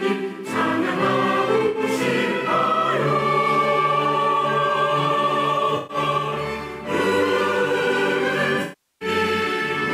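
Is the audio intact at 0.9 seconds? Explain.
Yes, at 0.9 seconds the audio is intact, with no dropout, click, distortion or other fault at that moment.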